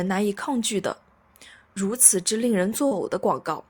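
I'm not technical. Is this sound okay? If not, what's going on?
No, there's one glitch. Around 2.87 to 3.05 s you'll hear a brief smear or wobble. That's short concealed packet loss: about 40 ms of audio arrived too late, so the receiver filled the gap by stretching the sound just before it, then blended back in.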